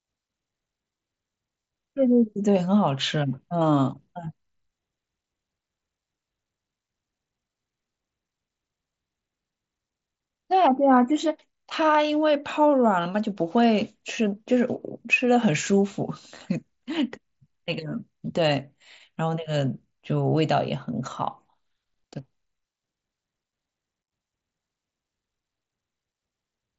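No technical faults can be heard in this speech recording.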